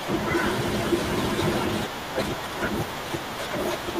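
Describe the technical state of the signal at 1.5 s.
At 1.53 s there is a lost LE Audio frame: one 10 ms frame of speech went missing, and the decoder filled the gap by repeating the previous spectrum with randomised signs. It sounds like a tiny noisy smear. A spectrogram shows a thin vertical strip where harmonics blur into noise, and the waveform shows a brief stretch of disordered texture. The surrounding audio carries the light grain of LC3 coding, likely at 64 kbps.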